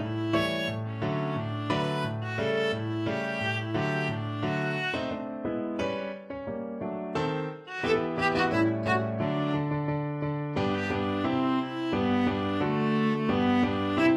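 From 5.02 to 11.02 s the adaptive stream drops to a lower bitrate, switching abruptly with no gap as the connection slows. The treble turns thin and synthetic, consistent with a low-rate HE-AAC stream. A spectrogram shows a sudden ceiling near 12.3 kHz across that stretch.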